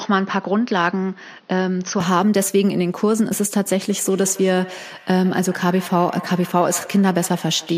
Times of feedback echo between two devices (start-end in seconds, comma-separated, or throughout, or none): 3.90-7.78